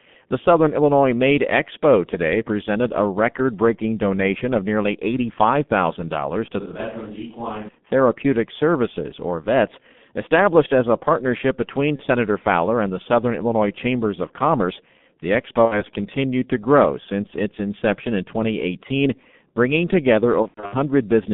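G.723.1 codec damage runs through the whole recording. The speech is squeezed into a band of roughly 150 Hz to 3.6 kHz, with nothing above that, so it sounds muffled. The heavy, hoarse texture and smeared consonants fit the 6.3 kbit/s mode. The coder's coarse 30 ms frames and sluggish model of the vocal tract cannot follow fast articulation, so transitions blur and the voice takes on a rough, hoarse grain.

VoIP packet loss concealed by the speech codec occurs three times. At 11.96 to 12.04 s, just after "as a partnership between", about 30 ms is missing, which fits one lost frame. The decoder fills it by repeating its last pitch and filter at falling gain, producing a brief fading smear. At 15.65 to 15.83 s, just before "continued to grow since", a 60 ms gap is stretched into a fading sound that leaves the speech weak for a moment afterwards. From 20.42 to 20.75 s, losses totalling about 210 ms are scattered over 300 ms, and the longest run is 90 ms. 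The speech breaks up repeatedly into fading fill, muting within the 90 ms run, before recovering.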